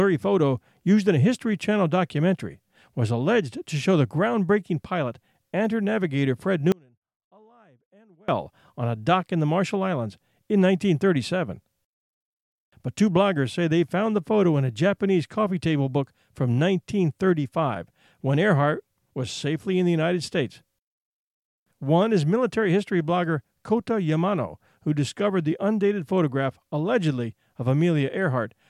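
From 6.72 s to 8.28 s there is an audio dropout to a faint residue. The speech cuts out abruptly, leaving faint sound roughly 35 dB down. The signal was likely lost while the path stayed live. Hard edges set it apart from a pause or fade.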